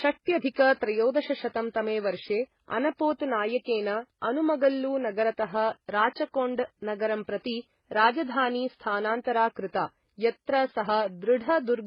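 The speech has most likely been transcoded between lossy codecs, an MP3 pass and then an HE-AAC pass, both at rates that fit roughly 16 kbit/s. Throughout, the MP3's narrow bandwidth and watery smearing persist beneath HE-AAC's synthetic, metallic-sounding upper band.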